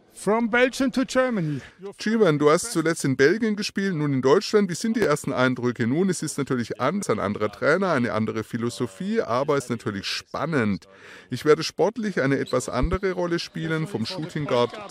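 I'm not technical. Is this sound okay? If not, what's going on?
No. At 5.02 to 5.06 s there is a single loud pop, a sharp thump much louder than the surrounding audio while the sound carries on beneath it. The likely cause is a sudden electrical jolt, such as a plug, switch or static discharge, briefly added to the signal.

At 7.01 s and 9.59 s there are two very short blips caused by damaged data in a compressed stream. Part of the stored file was corrupted, so the player briefly misread the audio there and produced a glitch.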